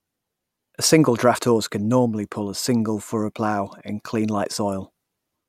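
No technical faults are audible.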